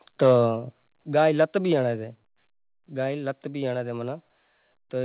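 Microphone volume stepped down at 1.02 s and again at 2.04 s in this speech recording: the level drops abruptly by about 5 dB, then about 3 dB, likely because call software cut the input gain in single steps. Microphone overload from 1.4 to 1.43 s flattens the peaks about 2 dB past the converter's limit, giving a brief harsh crackle, likely from excessive input volume. The call path carries nothing above 4 kHz, which fits a narrowband G.711 A-law codec.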